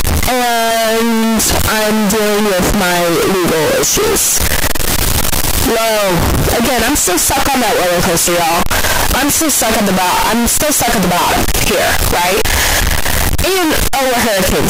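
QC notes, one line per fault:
Throughout: signed and unsigned mixed up. The speech is buried under very loud, harsh distortion, and the quiet stretches between phrases come out as loud as the talking itself. The likely cause is 16-bit samples being read with the wrong signedness, which flips the top bit of every value. Each time the waveform crosses zero it then leaps from one end of the range to the other, so even near-silent passages turn into loud hash.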